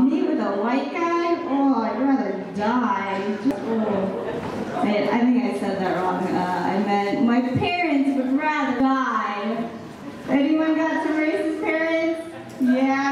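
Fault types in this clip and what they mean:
Damaged data in a compressed stream: part of the encoded bitstream is corrupt, so the decoder cannot parse the affected frames correctly, loses frame sync and resumes only when it finds the next valid frame header. Here it happens twice, at 3.51 s and again at 8.80 s, each time as a brief, instantaneous glitch: a short blip or chirp where the decoded audio breaks and picks up again.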